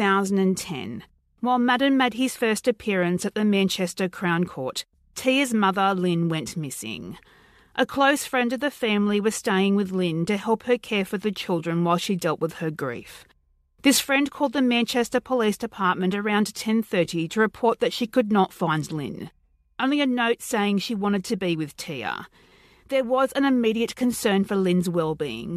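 Nothing technical stands out anywhere in this speech recording; there's no fault to point to at any moment.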